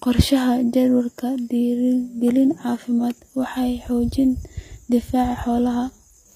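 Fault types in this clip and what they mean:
HE-AAC compression: The treble sounds rebuilt rather than recorded, with gritty, lispy s sounds and nothing above 15.5 kHz. This likely comes from low-bitrate HE-AAC, around 24 kbps.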